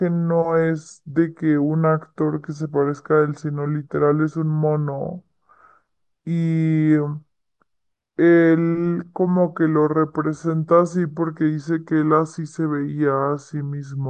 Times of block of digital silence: none

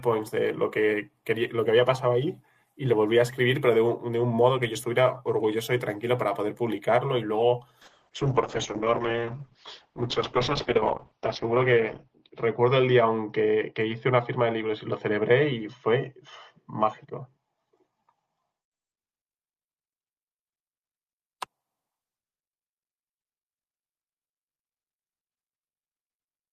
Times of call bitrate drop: 7.87-19.03

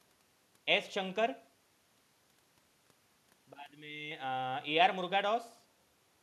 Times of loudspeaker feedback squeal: none

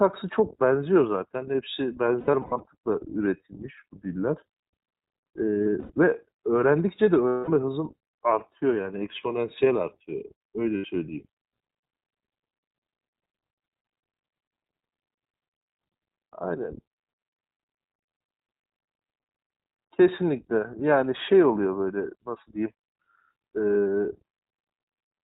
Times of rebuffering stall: none

